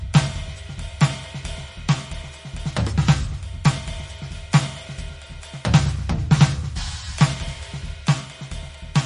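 Throughout this music clip the treble stops dead at about 10.6 kHz and the sound has a plainly audible watery, swirling quality, likely from heavy MP3 compression at a bitrate that points to roughly 40 kbps, where the encoder discards high frequencies and weak spectral detail to save bits.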